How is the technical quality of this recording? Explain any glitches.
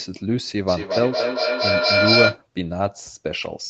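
There's one real problem: a feedback echo between two devices from 0.68 to 2.44 s. A second device in the room replays the speech into the microphone, and each repeat comes back every fifth of a second or so, thinner and ringier, stacking up to about 4 dB above the speech itself.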